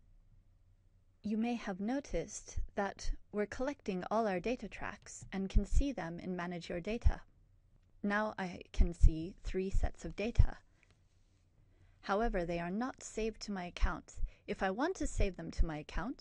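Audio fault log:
No fault is heard anywhere in the audio. There is nothing here that calls for a timed entry.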